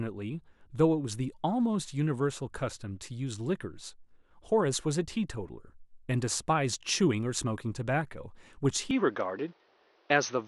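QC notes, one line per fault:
8.91–10.48 s, input switched to a poorer device: the sound abruptly turns duller and boxier with no gap, likely from a change of capture device. A spectrogram shows content cut off above 6.3 kHz plus a new noise floor about 35 dB down; waveform level stays unchanged.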